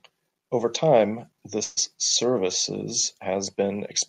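At 1.63 s packets were likely delayed in transit, the jitter buffer ran dry, and a call audio freeze followed until 1.79 s. The last sound carries on as a fading buzz for 134 ms, then the speech resumes intact, 134 ms later than before.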